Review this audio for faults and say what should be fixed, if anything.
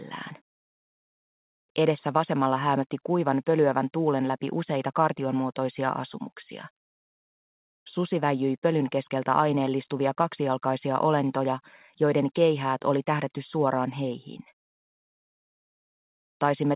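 Nothing stood out on listening that needs fixing; the audio carries the narrow, telephone-like band of a G.711 call path with nothing above 4 kHz, as expected for that codec.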